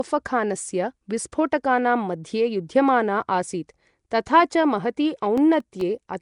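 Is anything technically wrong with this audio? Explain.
Yes, there are two problems. Throughout the speech there is plainly audible codec damage: a rough, hissy halo around the voice and a smeared, underwater quality, with nothing above 10.6 kHz. The likely cause is Nellymoser compression, the old Flash microphone codec, at a rate that sounds around 44 kbps. It codes short fixed blocks with very few bits per sample, drops weak bands entirely and fills them with noise, which produces that hiss and smear.

From 5.38 to 5.99 s there is processor overload crackle, a gritty burst of tearing over the speech. The processor misses its deadline on around ten very short audio buffers, each well under a millisecond. Each missed buffer is replaced with silence that has hard edges, so the gaps click against the surrounding audio. Because the misses bunch together, they merge into a crackle that stops once the load clears.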